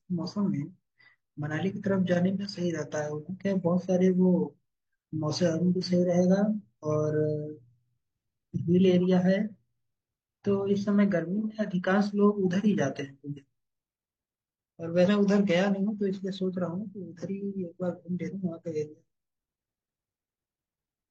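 At 13.33 s, 15.04 s and 18.28 s, compressed frames are skipped and the speech jumps ahead in whole 42.7 ms frames: roughly 0.4 s is lost, then about 0.15 s twice. Each join shows as a splice where the audio jumps ahead.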